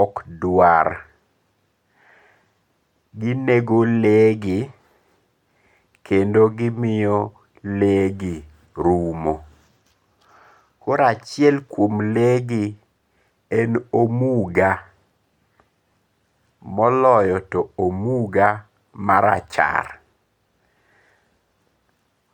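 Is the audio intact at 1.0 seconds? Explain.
Yes, at 1.0 seconds the speech plays through cleanly, with no dropout, glitch or distortion at that moment.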